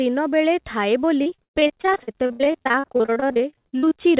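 From 1.22 s until nearly the end at 4.00 s, the speech turns choppy and robotic, with pieces repeatedly dropping out. This is repeated packet loss: the stream keeps losing or delaying packets, and each hole is bridged by stretching the last received sound. The 47 gaps run up to 130 ms, and close to half the span is concealed, so one patch follows the next, all within the 4 kHz-limited band of a G.711 call path.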